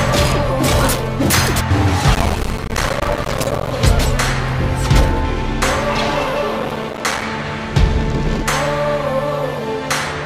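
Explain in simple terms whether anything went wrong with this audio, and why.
Processor overload crackle appears twice, from 2.15 to 3.71 s and from 6.6 to 7.22 s. The computer fell behind on tiny slices of sound, each a few milliseconds long. Every missed slice dropped out as silence, and many drops in a row made gritty crackle.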